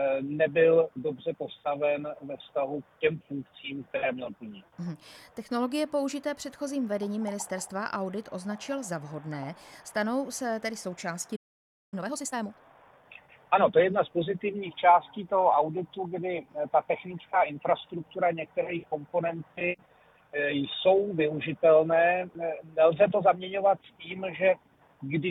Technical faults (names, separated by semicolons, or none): playback stall; time-compressed catch-up